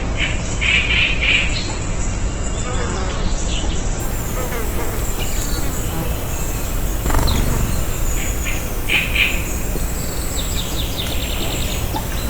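From the start to about 4.0 s you get the adaptive stream starting at a low bitrate: the player opened on a lean version, which sounds like roughly 12 kbit/s Opus, so nothing comes through above 8.2 kHz and the artefacts are thick. Then it snaps to a fuller rendition, around 64 kbit/s, without a gap.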